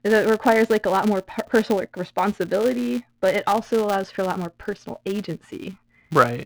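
A speech recording carrying a steady buzz at 200 Hz from start to finish, the sound of a filter restarted on every block. The filter loses its stored state at each block boundary and begins again from silence, so every block opens with a small transient; at 200 repeats per second those ticks fuse into a buzz that rises and falls with the speech level. On a spectrogram this appears as a harmonic comb at 200 Hz and its multiples, strongest where the speech is loud, and the waveform shows a tiny discontinuity every 5 ms.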